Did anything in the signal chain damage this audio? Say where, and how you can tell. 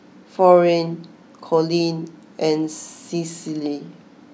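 No, nothing in the chain audibly damaged this speech.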